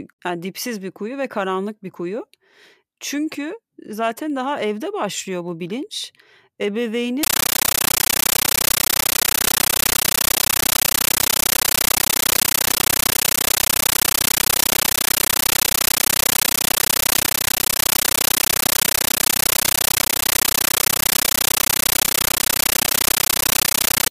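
From 7.23 s to the end, speech becomes loud chattering static, a compressed stream played as audio: undecoded AC-3 frames bursting 31 times a second.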